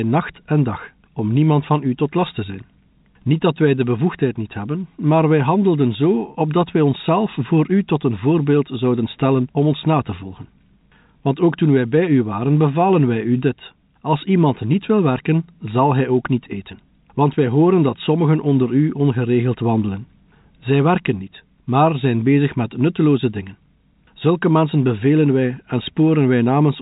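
Speech carried over G.711 telephone coding, band-limited to 4 kHz as that format requires, with no technical faults to report.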